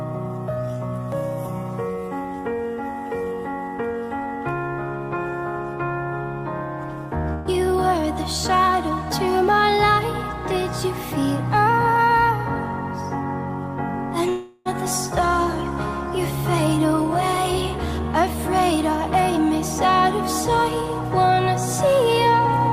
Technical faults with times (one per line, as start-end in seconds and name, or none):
7.33-7.48 burst of packet loss
14.29-14.68 long network dropout